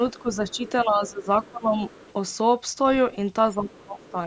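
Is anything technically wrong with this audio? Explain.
Yes, two kinds of fault run through this speech clip, both pointing to an echo canceller struggling while both ends of a call were talking.

Speech suppressed in double talk appears from 0.0 to 1.81 s and again from 3.57 to 4.15 s. The talker's level sags by roughly 15 dB in the first stretch, for about a second in total, and by roughly 20 dB in the second, over about half a second. The likely cause is the canceller failing to tell near speech from loudspeaker echo and attenuating both together.

The other side's voice leaking through is audible as a faint second voice at 0.16–0.7 s, 1.43–1.48 s, 1.89–2.13 s and 3.72–4.11 s. It sits some 25 to 30 dB below the main talker and comes in short scraps. This is likely residual far-end audio that the canceller did not fully subtract from the microphone signal after the device played it through its loudspeaker.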